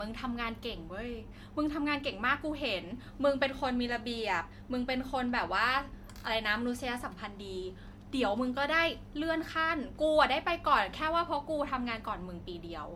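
Throughout, the speech sounds swirly, hollow and smeared, with blurred consonant attacks beyond what a single encode would leave. This is generation loss, likely from about four rounds of MP3 coding, at a rate that sounds near 96 kbit/s, with each pass re-quantising on a shifted frame grid.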